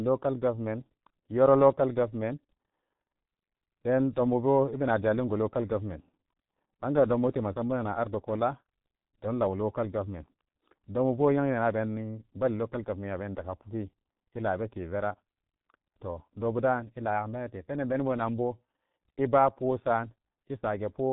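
Speech, and the whole clip has been through the G.723.1 codec, and it shows: everything above about 3.8 kHz is gone, leaving it muffled and hoarse. The slow-updating voice model smears consonants, and the damage is heavy, consistent with roughly 6 kbit/s.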